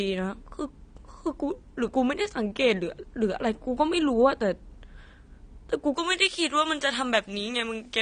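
From the start the speech sounds dull and smeared, with a warbling, swirly texture on held sounds and a fizzy edge on sibilants, and nothing is present above 9.7 kHz. This is plainly audible AAC compression, likely AAC-LC at a bitrate around 32 kbps. The encoder has too few bits for its frequency lines, so it lowers the top cut-off and coarsely quantises or drops bands, and that is heard as the smearing and the bubbly artefacts.

At 5.94 s the treble jumps up and stays raised to the end at 8.02 s. The speech turns thin, bright and hissy, with sibilants hard-edged, sitting on top of the same codec dullness. This is pre-emphasis left on. The treble boost applied for recording or transmission was never followed by its matching de-emphasis cut. The boost is about 11 dB at 10 kHz relative to 1 kHz, which fits a J.17 curve.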